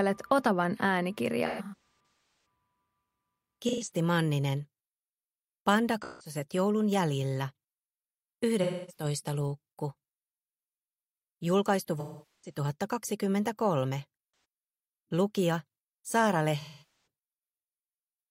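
AAC frame loss with concealment recurs seven times, at 1.46–1.76 s, 3.68–3.91 s, 6.02–6.35 s, 8.63–9.04 s, 12.00–12.58 s, 14.32–14.44 s and 16.60–17.06 s. The decoder is missing compressed frames and rebuilds each gap from the last good spectrum, so these patches sound smeared, noisy and phasey. Worst is the first, where about 640 ms of losses are scattered across a second, the longest run near 300 ms. The gap at 16.60 s covers about 470 ms.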